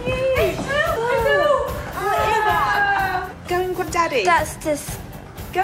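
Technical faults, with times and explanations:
0.95, 2.30 and 3.81 s: compressed frames skipped. The decoder drops whole frames, which fits a frame of about 23 ms. The sound jumps ahead roughly a fifth of a second at the first two points and a tenth at the last.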